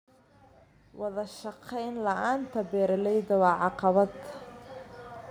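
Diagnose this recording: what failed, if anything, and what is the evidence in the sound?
Automatic gain rising, 0.97 to 4.2 s: in call processing, the gain control judged the input too quiet and climbed about 13 dB, swelling voice and background together.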